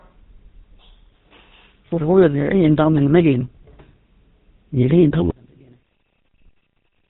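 All the way through, the speech has that GSM full-rate codec grit: a buzzy, gravelly texture with nothing left above 4 kHz, which fits the old 13 kbps GSM coder rebuilding the vocal tract from a sparse pulse excitation. The damage is plainly audible.

Then from 5.31 s to the end at 7.10 s, the level drops by about 33 dB and the voice nearly vanishes, leaving only a faint residue. That points to one channel inverted as the likely cause, so the centred voice cancels when the two sides are summed to mono.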